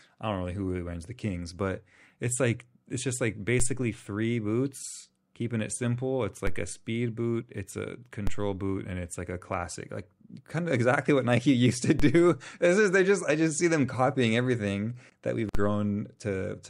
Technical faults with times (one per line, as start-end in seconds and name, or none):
3.60 DC step
6.47 DC step
8.27 DC step
12.00 DC step
15.55 DC step